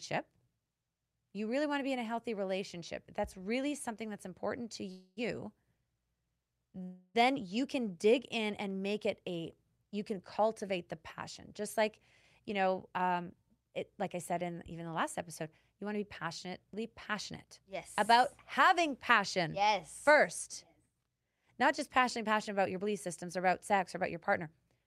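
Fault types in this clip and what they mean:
Call audio freeze: at 4.91 s and 6.83 s the speech stalls into a fading buzz for 0.25 s and 0.32 s, then resumes intact; likely the jitter buffer ran dry.
Jitter buffer speed-up: the receiver trims tiny pitch-period slices to cut backlog, so 12.5–16.66 s runs 7% fast and 21.68–24.43 s 5% fast, hurried but same pitch.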